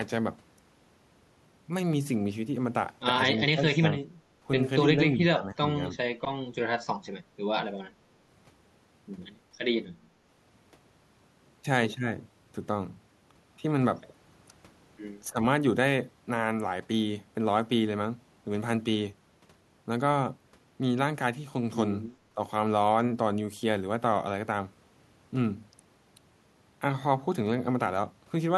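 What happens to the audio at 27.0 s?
Nothing goes wrong at 27.0 s; the speech there plays through intact, with no dropout, click, distortion or other audible fault.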